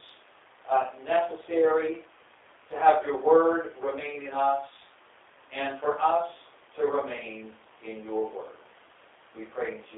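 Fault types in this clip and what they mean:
G.729 codec: speech rebuilt from a filter-and-pulse model, audibly rough and synthetic, fitting 8 kbit/s; spectrogram shows energy only between 300 Hz and 3.6 kHz.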